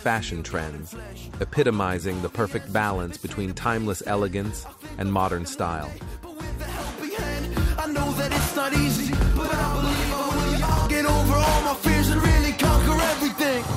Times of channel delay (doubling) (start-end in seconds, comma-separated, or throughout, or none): 8.96-10.86